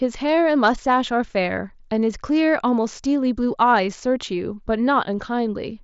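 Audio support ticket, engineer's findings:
No faults found in this speech clip. Band-limited at about 7.7 kHz with faint graininess on louder passages, consistent with a Bluetooth mSBC headset codec link working as designed.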